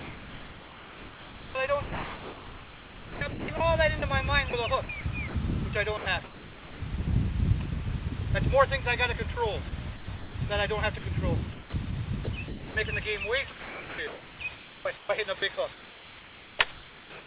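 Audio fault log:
0.00–5.34, 5.97–6.81, 9.69–10.35, 10.98–11.73, 12.24–12.75, 13.50–17.25 s: sound chopped by the voice detector. Stretches of the 4 kHz band-limited sound drop into comfort noise, most at the start and end, likely from the sender's voice detector gating transmission.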